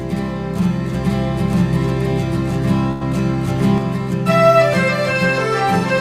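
From 0.95 s to 3.78 s the music carries a doubled audio track: a second full-band copy, about as loud as the original, trails it by roughly a second, likely from an edit holding two copies out of step. On a spectrogram the whole pattern repeats shifted right, and it switches on and off abruptly with no decaying tail.

At 2.91 s a burst of packet loss cuts in. For about 92 ms the last sound is stretched out and faded as a held buzz or dying hiss, and when the music resumes at 3.03 s about 80 ms of it is missing. On a spectrogram this shows as a smeared, darkening band followed by a sudden jump.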